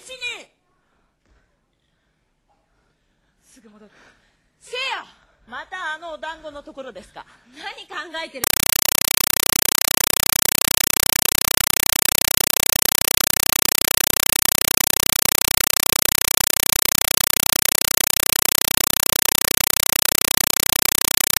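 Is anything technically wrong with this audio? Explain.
Yes. From 8.44 s to the end of the clip, a compressed stream played as audio replaces the sound. An AC-3 (Dolby Digital) bitstream, consistent with a 256 kbps encode, is being treated as plain samples instead of being decoded. Each data frame comes out as a burst of noise about 5.33 ms long followed by silent padding, repeating 31.25 times a second. The result is loud, harsh, chattering static with a steady rhythmic buzz.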